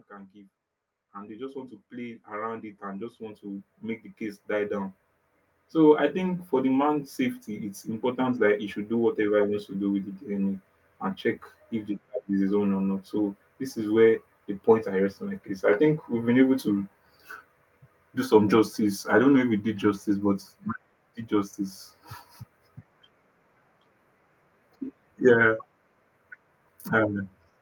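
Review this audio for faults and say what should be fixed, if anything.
Automatic gain rising runs from 0.07 s to 8.3 s: the gain control judged the input too quiet and raised it steadily by about 18 dB, so speech and background noise swell together. Fix it by setting a fixed input gain and disabling AGC.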